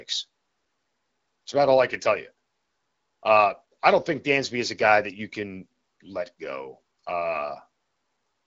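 No faults; the speech carries the band-limited character of an AMR wideband (HD Voice) link, with nothing above 7.6 kHz and only light coding texture, which fits one of its higher-rate modes near 16 kbit/s.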